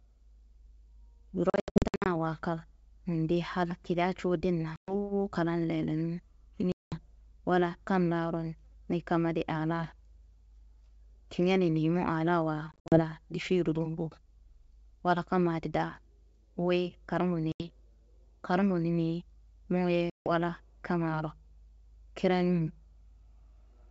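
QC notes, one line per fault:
1.50–2.07 s, packet loss on an ADPCM call: about 380 ms dropped in scattered gaps up to 80 ms, roughly twenty packets; hard-edged silent notches in the waveform, with slightly distorted speech where the decoder's predictor restarts out of step.
4.76–4.94 s, packet loss on an ADPCM call: a 120 ms hole, around seven packets, shows as a blank vertical band; speech resumes slightly distorted until the step size resynchronises.
6.72–7.00 s, packet loss on an ADPCM call: 200 ms gone, about ten packets, a clean-edged spectrogram gap, then brief distortion as predictor state recovers.
12.72–13.02 s, packet loss on an ADPCM call: 140 ms lost across 200 ms, longest run 60 ms; several short blank stripes, each followed by slight distortion while the decoder re-adapts.
17.52–17.65 s, packet loss on an ADPCM call: an 80 ms dropout, a few packets, visible as a flat waveform gap; onset afterwards slightly distorted by the mismatched adaptive step size.
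20.10–20.30 s, packet loss on an ADPCM call: 160 ms silent, roughly seven packets; sharp-edged blank column, then tens of milliseconds of distortion before the G.722 decoder settles.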